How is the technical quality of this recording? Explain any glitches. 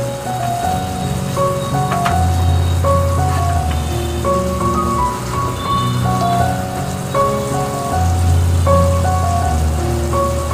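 No technical faults can be heard in this recording. There are no glitches to explain.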